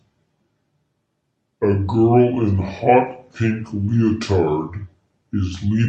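From the very start and running the whole way through, the speech sounds low and dragged, a clear case of wrong sample rate. Everything plays at about two-thirds speed and drops roughly seven semitones, with pitch and pace sliding down together. That fits 48 kHz material being read out at 32 kHz without any conversion, so the voice comes across as slow and heavy instead of natural.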